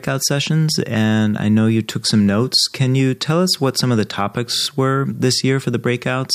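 At 4.55 s, right after "what some of the", the speech locks into a system hang loop until 4.67 s, just before "were this". The driver stalled while the hardware replayed one 23.2 ms slice of its ring buffer five times, which fits a 1024-sample buffer. It sounds like a brief buzz at about 43 Hz. The waveform shows identical repeated blocks, and the spectrogram shows evenly spaced vertical stripes with frozen harmonics. Essentially no audio is skipped afterwards.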